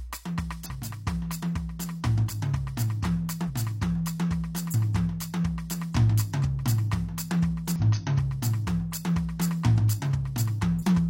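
Damaged data in a compressed stream hits the music five times: 0.65–0.70 s, 3.44–3.50 s, 4.69–4.75 s, 7.76–7.81 s and 10.78–10.83 s. Each time, corrupted bytes throw the decoder out of sync until it finds the next frame header, leaving a brief glitch of roughly 50–60 ms.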